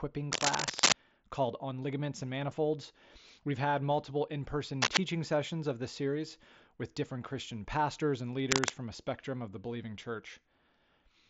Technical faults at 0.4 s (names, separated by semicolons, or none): cable scratch noise